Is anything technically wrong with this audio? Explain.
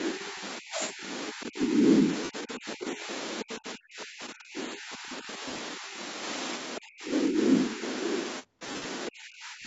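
Yes. Speech suppressed in double talk appears at 0.14–3.09, 3.43–5.98, 6.79–7.38, 7.76–7.82 and 9.09–9.67 s. The level sinks in pieces, by up to about 20 dB in the first stretch and about 40 dB later, with a slight dip of about 5 dB at 7.8 s. The likely cause is an echo canceller that could not separate the talker from the far end and attenuated both. Unlike dropouts, these dips follow the other side's activity.

Lost LE Audio frames occur at 2.24–2.30 s, 5.48–5.59 s and 8.67–8.85 s, the last scattered over about 180 ms. Voiced sound smears into noise as the LC3 decoder repeats the last spectrum with scrambled signs, fading during longer gaps. This short, noisy smear differs from the double-talk ducking, which cuts level without noise.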